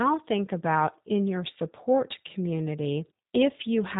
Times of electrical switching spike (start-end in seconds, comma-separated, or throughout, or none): none